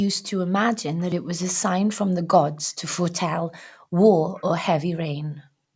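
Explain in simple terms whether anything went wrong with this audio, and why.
Two brief echo leaks occur, at 0.98 to 1.05 s and 4.35 to 4.44 s: a very faint copy of the speech returns about 0.28 s late. The likely cause is a loudspeaker on the other end whose echo canceller let a little of the sound slip back.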